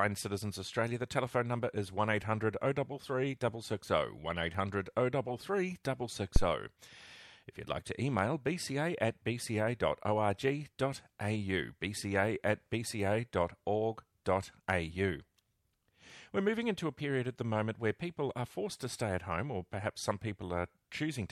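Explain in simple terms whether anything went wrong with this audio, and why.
Just before a sharp sound at about 5.84 s, and again at 14.25 s, a short hiss creeps in for roughly a hundredth of a second and the attack sounds softened. This is pre-echo: the compression works in chunks of about 26 ms and never switches to shorter ones, so noise meant for the loud moment spills into the quiet instant before it.

From 6.36 to 6.48 s there is a deep, dull thump that dies away within about 26 ms. That is a phantom power thump, caused when the microphone's power supply was switched while the input was live, sending a sudden jolt through the circuit.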